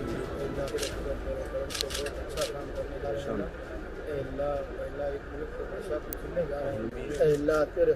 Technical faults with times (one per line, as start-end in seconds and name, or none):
1.81 electrical switching spike
3.03 compressed frames skipped
6.13 electrical switching spike